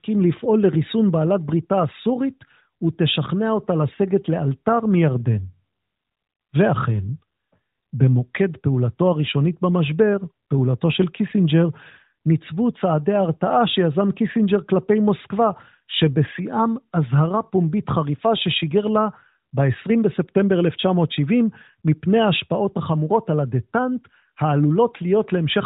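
The speech carries no technical faults, and the narrowband band-limiting with light codec colouring that can be heard fits AMR narrowband mobile coding at its 12.2 kbps mode.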